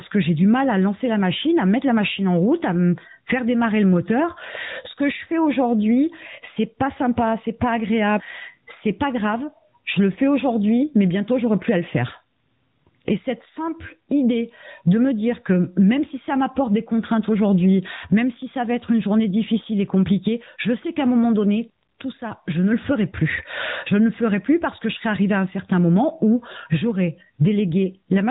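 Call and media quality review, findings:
Gain pumping, whole clip: likely input gain set far too high, fast limiter clamping each loud syllable. Gain swing about 25 dB. Dynamics flattened, sound squashed.

AMR narrowband mobile codec, whole clip: AMR-NB, pulse-driven vocal-tract model at 8 kHz, nothing above 3.8 kHz. Buzzy, synthetic voice. Plainly audible damage, fits a mid-rate mode near 10.2 kbps. Call microphone processing's low-bass trim is normal.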